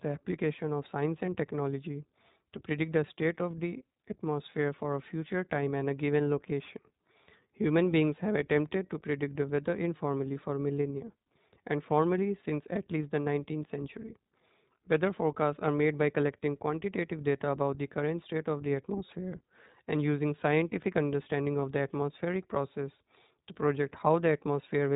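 Speech runs through the whole clip with a dull, band-limited tone and a slightly rough, synthetic edge, plainly audible throughout. This is the iLBC codec: it keeps nothing above 4 kHz and rebuilds each frame's excitation on its own, which fits its 20 ms, 15.2 kbps mode. At 1.26 s and again at 21.60–21.62 s, a brief buzzy, held-vowel smear replaces about 20 ms of sound, from lost iLBC frames. The decoder fills each gap by repeating the last pitch cycle mixed with noise. Because each frame decodes independently, the voice snaps back immediately afterward.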